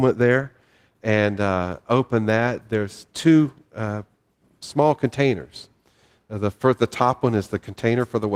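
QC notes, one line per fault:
Nothing to flag on this speech clip; the Opus compression it went through leaves it sounding full-band, with only light coding damage.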